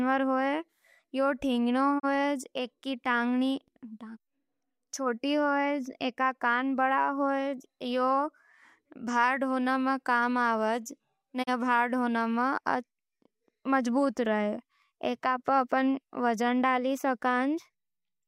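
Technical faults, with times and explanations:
1.98 to 2.05 s and 11.42 to 11.49 s, digital broadcast dropout: the receiver muted on a failed frame, so speech fades out over 20 ms, leaving a brief hole that fits one lost 32 ms frame.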